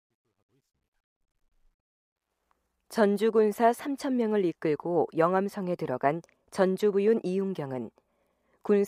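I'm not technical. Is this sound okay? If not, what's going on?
No. There's truncation distortion on a fade from 0 to 2.47 s, roughly the first two and a half seconds as the speech fades in. At its quietest, 0 to 1.2 s, the volume step kept too little detail (which fits a 12-bit stage), so the sound turns gritty.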